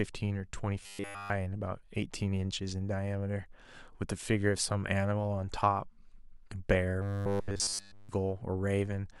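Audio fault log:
0.83–1.30 s and 7.02–8.09 s: robotic sound from repeated short buffers. The speech becomes a rigid metallic buzz at 100 Hz, likely from a roughly 10 ms buffer repeated almost continuously.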